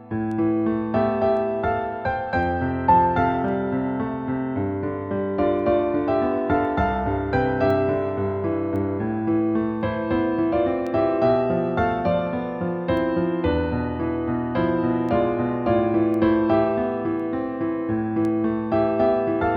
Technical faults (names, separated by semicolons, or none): word clock ticks